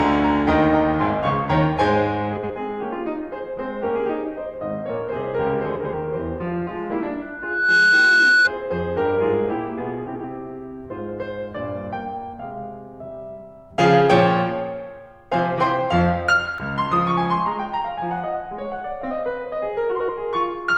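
At 2.36 to 2.51 s the music briefly garbles: two neighbouring blocks of about 64 ms each play in swapped order, which fits runs of three codec frames delivered out of sequence. The same frames-out-of-order flutter returns at 5.76 to 5.94 s, 10.07 to 10.24 s and 19.92 to 20.10 s, now with halves of about 85 ms. Each sounds like a stuttering jumble. Unlike a dropout, nothing goes missing and the timing stays intact afterward.

From 7.22 to 8.51 s a loudspeaker feedback squeal appears. A single 1.5 kHz tone grows out of the music over roughly half a second until it sits around 10 dB above it. That happens when a microphone hears its own loudspeaker and the loop gain at that frequency passes one. The steady swelling sets it apart from a fixed interference tone, which would start at full level.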